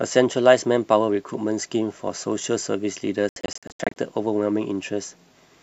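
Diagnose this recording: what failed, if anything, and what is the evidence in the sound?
The fault is a digital broadcast dropout at the reception stage. Between 3.29 and 3.97 s the speech breaks into several short silent holes, the longest 72 ms. About 360 ms of sound is missing, which fits roughly 15 lost frames. The receiver muted on corrupt frames, and their content is gone.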